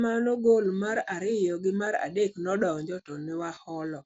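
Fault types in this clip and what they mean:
Concealed Bluetooth headset packet loss: voice packets travelling between the headset and the phone over the wideband mSBC link went missing, and the receiver filled each gap by repeating the closest-matching recent stretch of waveform. At 1.86 s the patch lasts about 7.5 ms, consistent with a single lost frame, and passes almost unnoticed. At 3.55 s a 15 ms patch, pointing to two consecutive frames, leaves a brief held, buzzy tone before the real speech resumes.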